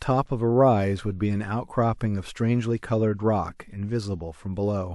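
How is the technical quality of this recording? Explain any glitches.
Nothing to flag here: listening through the recording, I didn't come across any glitch or technical fault worth pointing out.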